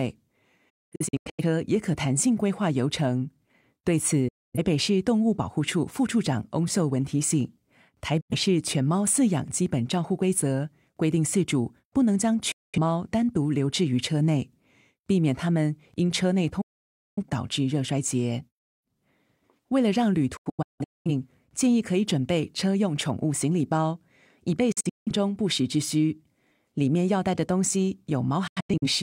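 Digital broadcast dropout mutes the speech at 0.70, 4.28, 8.21, 12.52, 16.61, 20.37, 24.72 and 28.47 s. The receiver lost frames, so the waveform falls flat through 8 ms fades. The spectrogram shows full-band blank holes, some broken into several short gaps.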